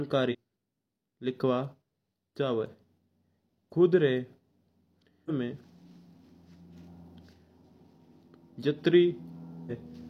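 Speech with three short bursts of damaged data in a compressed stream, at 0.28 to 0.35 s, 5.25 to 5.30 s and 9.66 to 9.72 s. Corrupted bytes make the decoder lose frame sync. Each brief disruption ends when it finds the next frame header.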